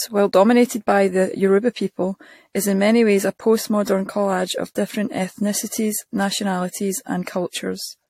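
Speech with a swirly, hollow, smeared quality throughout, blurred consonant attacks, and nothing above 16.5 kHz. This is likely generation loss: repeated lossy encoding, which fits around four AAC-LC passes near 64 kbit/s, each requantising on a shifted frame grid so errors accumulate.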